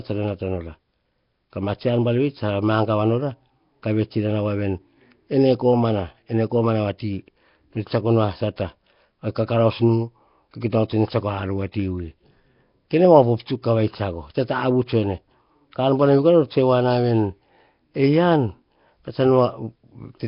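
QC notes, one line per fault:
throughout: Nellymoser compression. The speech carries a rough, hissy halo and a smeared, underwater quality, with heavy coding damage all the way through and nothing left above 5.3 kHz. This likely comes from Flash's old Nellymoser Asao mic codec, at a rate that fits roughly 22 kbps. It squeezes short blocks into a tiny fixed bit budget, gives the quieter bands no bits at all and fills them with noise, which produces that hiss and smear.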